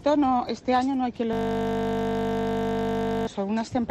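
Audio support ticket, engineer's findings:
System hang loop, 1.33 s to 3.27 s. Sound freezes into a steady 50 Hz buzz: one 20 ms slice replayed exactly, about 97 times. Likely host or driver stall while the audio device kept cycling its ring buffer, which fits a 20 ms buffer. Unlike mains hum, the buzz replaces the audio rather than sitting under it, and it stops abruptly at 3.27 s. Unlike a dropout stutter, there are no gaps or skips, only identical repeats.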